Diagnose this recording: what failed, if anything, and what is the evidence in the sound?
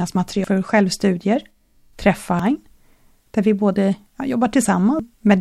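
The fault lies in the codec stage: damaged data in a compressed stream. Three brief glitches interrupt the speech at 0.44 s, 2.39 s and 4.99 s. At each point corrupted bytes leave the decoder unable to read a frame properly, so it misreads or drops that stretch and then recovers sync at the next valid frame header. On a spectrogram each event shows as a thin vertical break, and the waveform shows a short, abrupt discontinuity.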